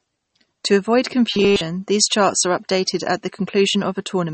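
Throughout the speech, nothing is heard above 8.4 kHz. The treble stops at that fixed point, and the damage is plainly audible. Weak frequency detail flickers in and out between frames, giving a watery, swirly texture. Sibilants turn metallic and chirpy. Consonant attacks blur. This is likely MP3 compression, with the encoder dropping treble and thin detail to save bits. The sound points to a low bitrate, around 32 kbps.

From 1.31 to 1.61 s, just before "these charts are updated", the speech becomes a rigid, metallic buzz at 200 Hz. This is robotic sound from repeated short buffers. Fresh audio stopped arriving in time, so the same tiny slice was replayed over and over while real audio was skipped. Essentially the whole stretch is repeats. The 200 Hz pitch fits a loop of about 5 ms, likely a buffer that size.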